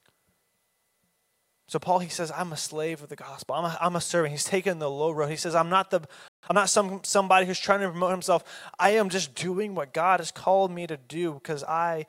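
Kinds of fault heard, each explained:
Playback stall: The speech cuts to silence right after "says I'm not the", from 6.28 to 6.43 s, roughly 150 ms. The player likely ran dry of buffered data or had its thread blocked. Unlike a packet-loss dropout, nothing is skipped: the sound picks up where it stopped.
Time-compressed catch-up: From 6.43 to 6.57 s, leading into "some somebody who's trying", the audio runs at twice normal speed as the player trims and cross-fades small slices to clear its backlog. Pitch stays natural, unlike a plain speed-up, which would raise it.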